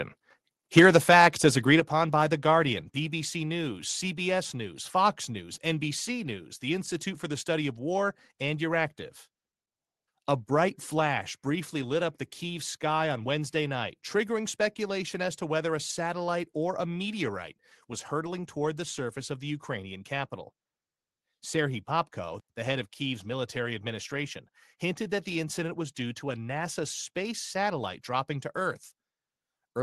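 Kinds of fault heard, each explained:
Microphone overload: From 0.77 to 1.27 s, just before "as agreed upon by", the loudest peaks flatten into a harsh crackle, likely from input gain set too high, overshooting by about 6 dB. A small fraction of samples sit flat-topped on the waveform, and the spectrogram shows broadband vertical smears.
Microphone volume stepped down: The sound level drops abruptly three times, likely because the call software cut the microphone's input gain after detecting overload: about 3 dB at 0.79 s, about 7 dB at 1.8 s between "as agreed" and "upon by", and about 2 dB at 2.82 s. The waveform envelope narrows in clean steps.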